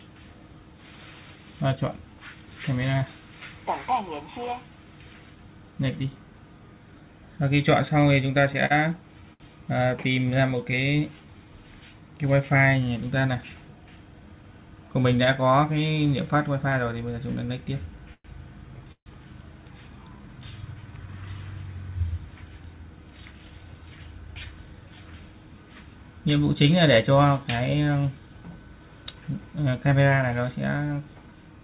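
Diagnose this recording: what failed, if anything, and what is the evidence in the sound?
Scattered short gaps, a network-stage fault concealed at the receiver, run from 7.88 to 10.79 s. Roughly ten brief holes appear as ticks and smears where the last sound was continued to cover lost or late packets. Together they fill about a fifth of a second, with the longest around 70 ms, or roughly 7% of that stretch, and nothing is left missing. Unlike a stall pattern, the holes are isolated and short, with clear audio between them.

A jitter buffer slow-down, a buffer-stage adjustment, occurs twice. From 10.18 to 11.46 s the audio runs at 93% speed, gaining 100 ms. From 19.92 to 21.08 s it runs at 84%, gaining 191 ms. The receiver repeated single pitch periods or slices of pauses to rebuild its reserve, so sounds are drawn out while pitch stays put. What separates this from stutter is that playback never halts. 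It just stretches smoothly.

A jitter buffer speed-up, also a buffer-stage action, appears from 13.41 to 14.44 s and from 23.22 to 25.02 s. Both run at 113% speed, trimming about 150 ms and about 300 ms respectively. Too much audio had queued, so the receiver cut out short pitch-period pieces in succession to reduce delay. The result sounds hurried at an unchanged pitch. That distinguishes it from a sample-rate error, which would raise the pitch along with the speed.

Repeated stalls (stutter), caused by packets arriving late at the network and jitter buffer stage, hit between 18.14 and 19.08 s. Four waits were bridged by continuing the last sound, totalling 262 ms with the longest at 141 ms, or 28% of that span, and nothing was lost. Compared with the scattered gaps, these holes are longer and packed closely together, so the audio drags and stutters instead of merely ticking. Throughout, the call path's band limit at 4 kHz points to G.711 mu-law at 64 kbps.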